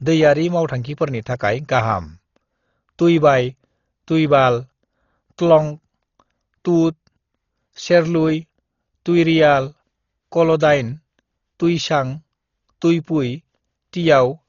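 Speech throughout, dull with nothing above 7 kHz and a rough, fluttering noise clinging to the voice, likely Dolby Digital compression at a bitrate near 32 kbps; unlike a plain low-pass, starved bands are refilled with noise.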